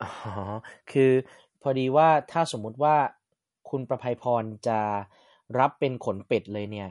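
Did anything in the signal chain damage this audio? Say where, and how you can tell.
Yes, at the codec stage. Throughout the speech there is nothing above about 11.1 kHz. The sound is watery and swirly, and s sounds chirp. That points to MP3 compression, likely at a low bitrate near 48 kbps, cutting treble and switching weak frequency lines on and off.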